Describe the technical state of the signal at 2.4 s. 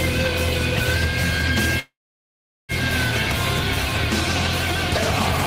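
At 2.4 s the audio is inside a call audio freeze, from 1.79 s to 2.72 s. The last sound trails off and the rest is silent. Packets were likely held up, draining the jitter buffer. Playback then resumes where it stopped, nothing missing, now 0.89 s later.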